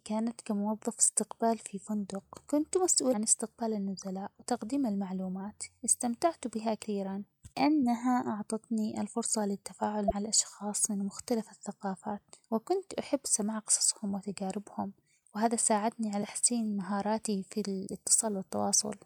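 Four brief glitches cut through the speech, each about 44 ms long: at 3.10 to 3.14 s, between "استقبال في فندق كنت" and "استقبال النزلاء وتقديم المعلومات"; at 6.81 to 6.85 s; at 10.07 to 10.12 s, just before "الاشخاص من مختلف الثقافات"; and at 16.19 to 16.23 s, right after "قصصهم وتجاربهم وهذا ساعدني". These are damaged data in a compressed stream. Corrupted bytes make the decoder misread frames, lose sync and hunt for the next valid header, and that produces each blip.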